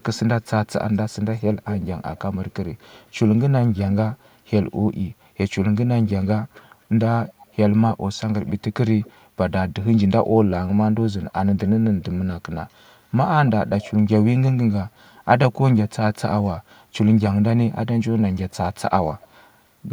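An echo canceller on the far end likely failed to fully remove its loudspeaker's output, so part of the speech came back as echo leak about a quarter-second late, the delay creeping from 241 to 257 ms. It surfaces as faint, trailing copies at 0.15–2.19, 2.79–2.89, 3.78–4.29, 6.07–6.61, 7.41–7.94, 8.47–9.12, 13.46–13.88 and 19.2–19.27 s, loudest near the start at around 15 dB below the speech and elsewhere some 20 to 35 dB below it.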